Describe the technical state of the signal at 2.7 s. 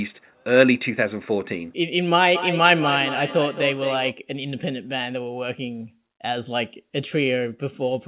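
At 2.7 s the sound returns at roughly a fifth of a second, each repeat thinner and more ringing, peaking about 7 dB below the direct speech. This is feedback echo between two devices, running from 2.35 to 4.16 s: one device replays the other's microphone, which picks it up again beyond either echo canceller's reach.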